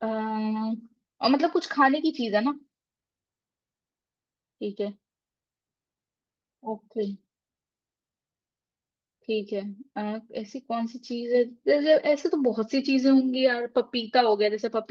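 A listener hears nothing technically wrong in this speech recording: the signal stays steady and intact throughout, with no audible disturbance at any point.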